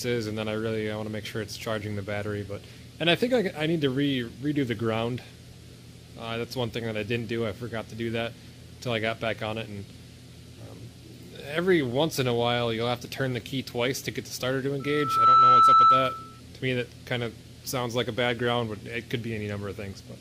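At 11.92 s and again at 13.05 s there's a sharp little click, each one a single tick with nothing audibly missing around it. That's the signature of dropped samples: a tiny sliver of the stream, on the order of a tenth of a millisecond, likely went missing, so the waveform jumps straight from one value to a later one. The jump is far too brief to take any sound away, but the discontinuity itself snaps through as a thin, bright click.

Then from 14.80 s to 16.41 s you get a proper loudspeaker feedback squeal. A single tone at 1.3 kHz climbs out of the sound over roughly half a second and settles at about 15 dB above everything else, a piercing whistle that sits right on top of the audio. What's happening is that the microphone is hearing the loudspeaker it feeds, and at that one frequency the loop gain tips past unity, so the tone keeps reinforcing itself until something in the chain caps it or the loop gets broken.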